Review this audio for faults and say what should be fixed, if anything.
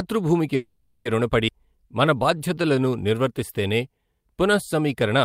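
At 0.55 s the speech stalls into a fading buzz or hiss until about 1.08 s, a call audio freeze. The receiver stretched the last sound for roughly 500 ms and then resumed where it stopped, with nothing lost, likely because packets were held up and the jitter buffer ran dry. Sorting out the network delay spikes or giving the buffer more headroom would stop this.

Around 1.47 to 1.51 s there's a skip ahead. Playback jumps forward with barely any gap, and about a tenth of a second of speech is gone, so the two sides butt together. A chunk of audio was dropped, either on the way or by the buffer when it overflowed, while later audio was already waiting. A gentler catch-up policy that trims pauses instead of discarding speech would avoid it.

From 1.59 to 2.90 s the jitter buffer slow-down kicks in. The receiver repeated pitch periods to rebuild its reserve, adding 111 ms, so the speech plays at 92% speed with the same pitch and drawn-out sounds. 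Keeping the buffer target steadier would prevent these stretch-and-skip swings.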